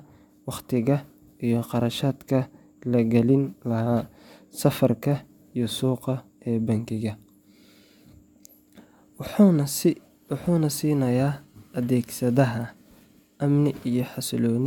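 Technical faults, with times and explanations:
Nothing technical goes wrong anywhere in this speech recording, so there's no fault to list here.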